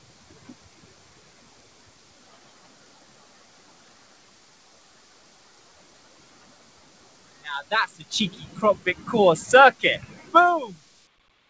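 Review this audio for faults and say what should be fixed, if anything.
Throughout the clip, onsets punch through while sustained parts and decaying tails sink and swell. The result is a pumping, fluttering, thinned texture, with level swings of roughly 20 dB. The cause is a noise suppressor applied to music or sounds: a suppressor tuned for speech treats steady tones, ambience and reverb tails as noise and pulls them down. Nothing is heard above 8 kHz, which fits a G.722 call codec at 64 kbps. To prevent this, turn off noise suppression, or use a music mode, whenever non-speech audio is sent over the call.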